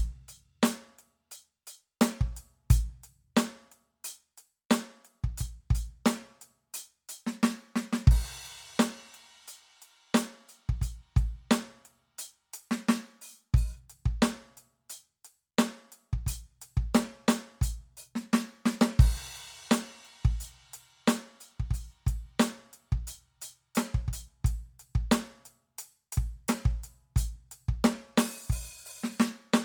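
Music with a grainy, breathy edge on its upper detail from start to finish, the highs sounding noise-filled rather than clean, though the band still reaches 20.2 kHz. This is plainly audible Bluetooth LC3 compression, likely at a low bitrate that fits about 48 kbps with 10 ms frames.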